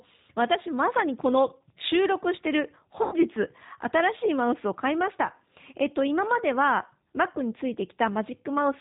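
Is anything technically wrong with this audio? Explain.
Yes, there are two faults.

Throughout, G.729 codec damage is plainly audible, consistent with an 8 kbit/s G.729A stream. Speech rebuilt from a filter, pitch predictor and sparse pulses sounds rough and synthetic, with nothing above 4 kHz. Unlike plain low-pass filtering, it adds a buzzy grain.

From 3.03 to 3.15 s, VoIP packet loss concealed by the speech codec covers about 90 ms, which fits three lost packets. The decoder extends the last pitch and filter as a fading buzzy tone or coloured noise rather than silence, and the voice stays weak or distorted for tens of milliseconds or more afterwards.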